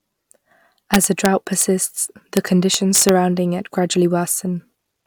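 A sum or gain stage in this speech ran past its integer ceiling and wrapped to the opposite sign instead of limiting. The result is integer overflow cracks, harsher than clipping, from 0.94 to 1.26 s, at 1.62 s, at 2.37 s, and from 2.74 to 3.09 s just before "it gradually", with peaks overdriven by about 2 dB at most.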